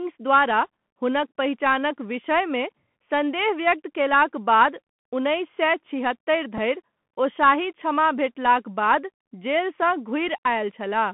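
Speech heard through the Bluetooth CVSD headset codec: the band is narrowed to roughly 150 Hz–3.4 kHz, so a spectrogram shows a hard ceiling with nothing above, while sibilants sound scratchy, loud high sounds distort as the one-bit delta steps fall behind, and granular hiss fills the waveform's quiet gaps. A Bluetooth headset packet repeated at 6.57 s, just before "धरि ओ शाही क्षमा", and again at 10.28 s, each a brief buzz near 267 Hz where about 7.5 ms of audio, which fits two lost 3.75 ms packets, was replaced by re-decoded old bits, visible as a short duplicated stretch in the waveform.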